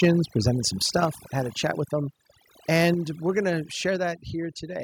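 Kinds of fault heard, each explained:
Overdone noise removal: Noise reduction set too aggressively throughout the speech, switching off frequency bands near its noise estimate along with quiet parts of the voice. The background drops and breaks up into twinkling specks.
Microphone overload: Waveform peaks cut flat at the converter's limit, adding a harsh, crackling edge. It is heard from 0.02 to 0.09 s, just before "presented some", and at 2.75 to 2.78 s, just before "we're going to". A few percent of samples are affected, likely from input gain set too high.
Microphone volume stepped down: Voice and background drop abruptly in level in single steps: about 3 dB at 0.05 s, about 5 dB at 1.05 s, about 6 dB at 2.94 s, and about 2 dB at 3.96 s after "we're going to". This is likely call software cutting the input volume when it found the microphone too loud.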